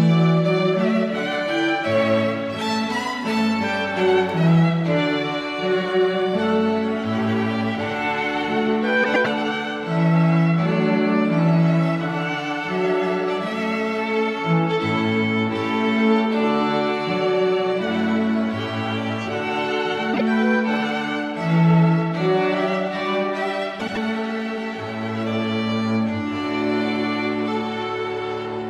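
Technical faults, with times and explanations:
9.03–9.27 s, 20.14–20.21 s and 23.79–23.97 s, frames out of order: each stretch sounds like a brief garbled flutter, because two adjacent blocks of audio, about 105, 26 and 78 ms long respectively, were decoded in swapped order, so the halves play reversed while the total duration is unchanged.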